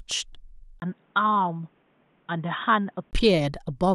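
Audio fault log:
0.80 to 3.13 s, input switched to a poorer device: the speech abruptly turns dull and boxy after a brief gap of about 20 ms, with nothing above 3.8 kHz, a faint new background noise far beneath the voice, and no real jump in loudness, then it opens up again at 3.13 s. This likely comes from the recording input changing mid-take to a narrower-band microphone or headset call profile, which brings its own tone and noise floor before switching back.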